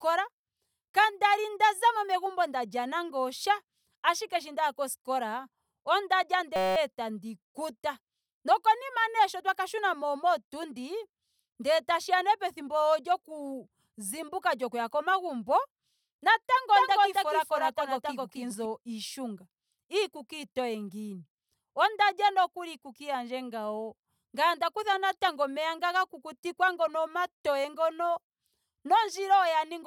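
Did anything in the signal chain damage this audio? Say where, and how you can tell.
Yes. At 6.56 to 6.76 s, between "ndaya koskola onda lya" and "tandi kuta", a steady 188 Hz buzz: a system hang loop, the driver replaying a 5.33 ms buffer, fitting 256 samples.

From 16.75 to 18.65 s an equally loud, dry copy trails about 300 ms behind, starting and stopping abruptly: a doubled audio track, likely from a second capture path.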